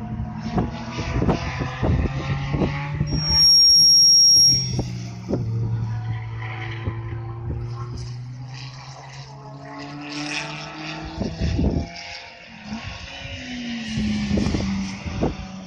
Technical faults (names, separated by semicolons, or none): loudspeaker feedback squeal